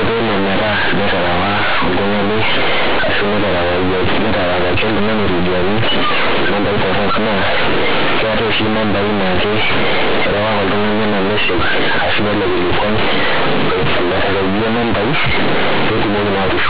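From start to finish, mu-law companded audio is being read as linear 8-bit samples with no expansion, so every sign change swings the output across half its range. The speech comes out very loud and buzzy and badly distorted, with heavy noise filling the pauses.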